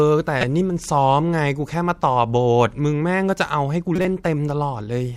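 At 0.41 to 0.44 s and again at 3.96 to 4.05 s, corrupt frames are decoded: flipped bits send misread gains and codes into the decoder, throwing energy to wrong frequencies. Each sounds like a sharp chirping burst peaking near -5 dBFS, the second about four frames long.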